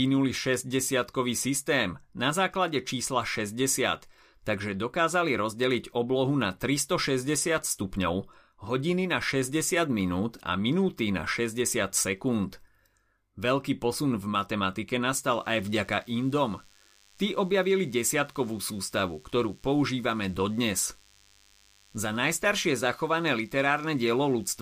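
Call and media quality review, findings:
DECT cordless phone buzz from 15.25 s right after "posun v matematike" through to the end. Thin, steady 100 Hz buzz stacked with harmonics, sitting well under the speech, roughly 35 dB down. Probable component: mic preamp or analogue input picking up a nearby DECT handset or base. Its 10 ms radio bursts get rectified into audio. Worth checking what's parked near the mic.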